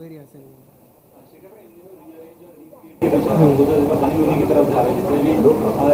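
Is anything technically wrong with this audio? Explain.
Yes. Three separate faults can be heard.

From 0.0 to 3.02 s the sound is very weak when heard in mono, about 28 dB below where it should be. This is likely one channel inverted. One stereo channel has its polarity flipped. Whatever the two channels share cancels when they are summed. The shared sound, background included, almost disappears. Only the small difference between the channels is left, so what remains sounds faint.

At 3.27 to 3.29 s there is a skip ahead. Playback jumps forward with no gap filled in. About a second of audio is missing. That stretch was dropped while later audio was already waiting in the buffer. The two sides of the cut are joined almost directly. The sound lurches from one moment to a much later one. The delay drops by roughly the same amount.

From 3.41 to 4.13 s there is a jitter buffer speed-up. The audio runs at 132% of normal speed, but the pitch stays the same. 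The receiver was holding more audio than it aims for. To cut that delay, it removed many short pieces, each one or a few pitch periods long. In total about a fifth of a second was taken out. The passage sounds hurried.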